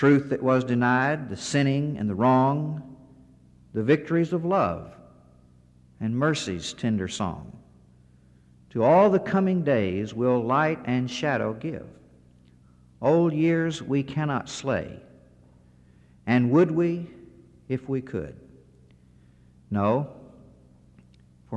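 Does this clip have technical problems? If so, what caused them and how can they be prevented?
No, the signal holds steady throughout with no technical faults to trace or prevent.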